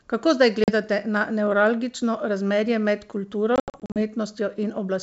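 This wideband speech clip has packet loss on an ADPCM call. Around 0.64 to 0.71 s, just before "na nevralgično razmerje med", a couple of packets go missing and leave a hard-edged 40 ms silence. From 3.56 to 4.00 s, after "nevralgično razmerje med kulturo", around ten packets drop out, giving 240 ms of gaps scattered over 400 ms, the longest run 80 ms. What sets this apart from a plain dropout is what follows each hole: the decoder's adaptive predictor and step size have drifted from the sender's, so speech resumes slightly distorted before settling within tens of milliseconds. The underlying G.722 coding itself stays clear up to about 7 kHz.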